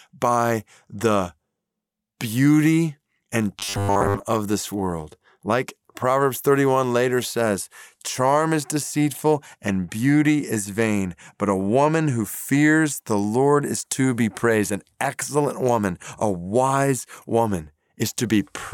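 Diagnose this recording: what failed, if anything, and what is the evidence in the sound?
The driver or buffer likely ran short, looping 10 ms chunks from 3.59 to 4.26 s, after "beauty and": robotic sound from repeated short buffers, a 100 Hz buzz.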